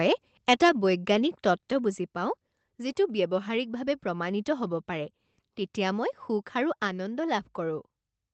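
At 6.87 s the speech and the background noise beneath it both drop by about 3 dB in a single step, with no fade, and stay at the lower level. This is a microphone volume stepped down, most likely the call software reducing the device's input gain after judging the signal too hot. On a waveform the envelope narrows abruptly at that instant, and on a spectrogram every band, including the noise floor, dims evenly at once.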